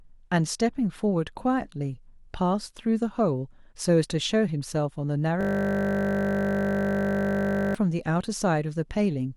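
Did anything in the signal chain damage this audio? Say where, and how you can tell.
Yes. The damage is at the driver or buffer stage: a system hang loop from 5.41 to 7.75 s. The speech freezes into a steady 50 Hz buzz. One 20 ms slice replays over a hundred times while the hardware keeps cycling one stale ring buffer.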